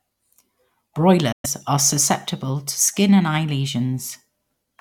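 A Bluetooth dropout cuts this speech clip from 1.32 s to 1.46 s, leaving a hole of roughly 0.14 s before the talker resumes on "are susceptible to skin". The likely cause is wireless audio packets that reached the headphones too late and were discarded, so playback fell silent rather than stalling. The speech picks up further along, as though it had kept playing unheard, and the roughly 116 ms of missing audio fits about five lost frames.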